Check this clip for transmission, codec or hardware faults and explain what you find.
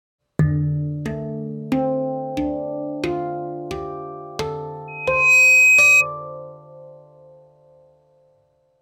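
One fault is present: loudspeaker feedback squeal from 4.88 to 6.06 s. A microphone picked up its own loudspeaker, and at 2.5 kHz the loop gain went above one, so a single 2.5 kHz tone swells over about half a second into a piercing squeal roughly 15 dB above the surrounding sound.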